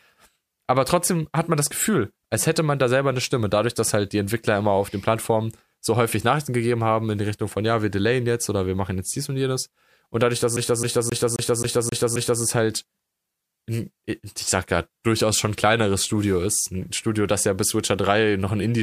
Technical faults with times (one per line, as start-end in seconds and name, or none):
10.56-12.42 CD stuck on one turn